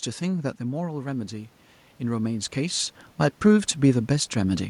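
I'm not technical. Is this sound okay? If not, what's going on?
No. Automatic gain rising, from 0.58 to 1.6 s: the speaker drifts away from the microphone around half a second in, so the recording level slowly turns itself up to compensate, and the voice and the room's background noise both swell together.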